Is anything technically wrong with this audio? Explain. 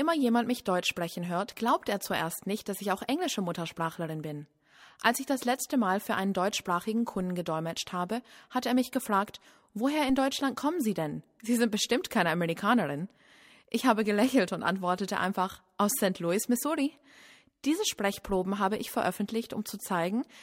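Yes, there is a single DC step at 10.1 s. The waveform's zero line abruptly shifts by about -31 dBFS, the kind of jump a converter recalibrating or an offset-carrying input being switched in would cause. The offset doesn't hold. A high-pass around 5 Hz drains it away over a fraction of a second. You hear it as one low thump or click at that instant, while the sound itself carries on unaltered.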